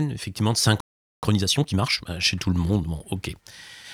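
At 0.80 s, right after "effectivement de", the speech cuts off into a playback stall: about 0.43 s of silence until 1.23 s. The player likely ran out of buffered data. On a waveform this is a flat line; a spectrogram shows a blank vertical band.

From 1.23 s to 2.07 s comes time-compressed catch-up. The player removes small overlapping pieces and cross-fades the joins, so the speech runs at about 1.5 times normal speed with unchanged pitch, ending before "bah chez tout le". Syllables look squeezed closer together on the waveform, while harmonic spacing on the spectrogram stays the same.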